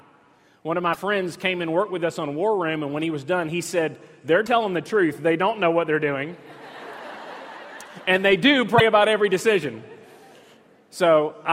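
At 0.93–0.98 s, 4.45–4.48 s and 8.77–8.81 s the sound skips forward with a brief garbled glitch, each lasting a few tens of milliseconds. The likely cause is a broken MP3 bit reservoir: after missing frames, the next frames (about 24 ms each) decode using borrowed bytes from the wrong frame.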